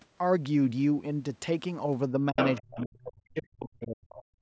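At 2.31 to 2.38 s the speech briefly drops away by roughly 30 dB, a short hole in the talker's level. Then from 2.58 to 4.35 s it is pushed down again in pieces, with gaps totalling about a second and a half and the deepest dips near 40 dB. This is speech suppressed in double talk. Both sides were likely talking at once, and the echo canceller could not tell the near talker from the loudspeaker echo, so it attenuated everything it heard.

Right after the first dip, from 2.39 to 2.62 s, a second voice comes through at about the same loudness as the talker. Fainter scraps of it follow at 2.79 to 2.83 s, 3.38 to 3.42 s, 3.60 to 3.86 s (the strongest of these, some way below the talker) and 4.09 to 4.14 s. This is the other side's voice leaking through, likely because the echo canceller left part of the loudspeaker playback in the microphone signal.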